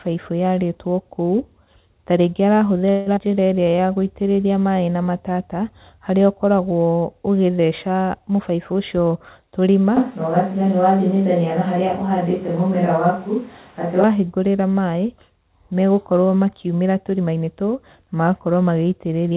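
From 2.90 to 3.08 s, packets were likely held up and the jitter buffer ran empty, a call audio freeze: the last sound is stretched into a fading buzz for about 160 ms, with nothing lost.

At 3.16 to 3.19 s, a skip ahead: roughly 70 ms of audio was dropped, so playback jumps forward and the two edges are joined almost seamlessly.

From 3.25 to 3.89 s, the buffer was rebuilding its reserve by repeating pitch periods, a jitter buffer slow-down: the sound runs at 89% speed at unchanged pitch, gaining 75 ms and sounding drawn out.

From 9.97 to 14.04 s, the close microphone's signal likely dropped out, a switch to a distant microphone: at about the same level, the sound turns abruptly roomy and hollow, with thinner bass and background noise about 30 dB below the speech, then snaps back.

From 16.26 to 17.63 s, the buffer was holding too much audio and trimmed pitch periods, a jitter buffer speed-up: delivery runs at 110% speed, about 150 ms shorter, and sounds hurried at normal pitch.

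Throughout, the call path's G.711 A-law coding leaves nothing above 4 kHz, which fits a 64 kbps narrowband link.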